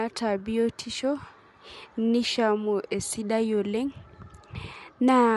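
Throughout, likely Bluetooth LC3 compression, consistent with a rate near 48 kbps, cuts everything above 11.6 kHz and leaves the speech audibly grainy and breathy.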